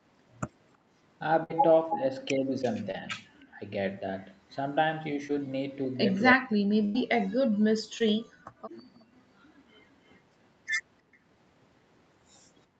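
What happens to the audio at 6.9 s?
Two things overlap at 6.9 s. From 6.35 to 7.29 s the speech is pushed far down, at its deepest by around 40 dB, for roughly a second. This is most likely speech suppressed in double talk: with both sides talking, the echo canceller couldn't separate the near talker from loudspeaker echo and attenuated both. On a waveform the envelope sinks to a thin trace. On a spectrogram the energy fades.

Inside that stretch, from 6.85 to 6.96 s, there is a burst of packet loss. About 94 ms of lost audio was filled by the receiver extending the last sound and fading it out, so it comes across as a held, dying tone or hiss. About 100 ms of the original speech is simply missing when playback resumes. On a spectrogram this shows as smooth, unchanging horizontal smears that dim toward the right, then an abrupt jump into new content. The waveform shows a repetitive, decaying pattern with a discontinuity at 6.96 s.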